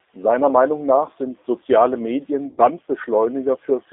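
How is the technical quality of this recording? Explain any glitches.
The recording is plainly degraded throughout by low-rate speech coding, with one brief dropout near the end.

G.729 codec: the whole clip sounds thin, slightly rough and synthetic, with nothing below about 300 Hz or above about 3.7 kHz. The speech is rebuilt from a vocal tract filter, a pitch predictor and a few pulses per frame, which fits the 8 kbit/s G.729A VoIP codec.

VoIP packet loss concealed by the speech codec: from 2.47 to 2.61 s the speech smears into a stretched sound that fades, and stays weak just afterwards. About 110 ms of packets went missing, so the decoder stretched its last pitch and filter while turning the gain down.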